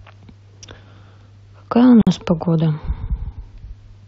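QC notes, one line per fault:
2.02–2.07 s: gap at a join of encoded pieces. A 53 ms silence cuts into the speech, which resumes where it stopped; separately encoded pieces were joined with encoder delay and end padding left in. Waveform: flat stretch, abrupt, slightly smeared edges. Spectrogram: full-height blank band.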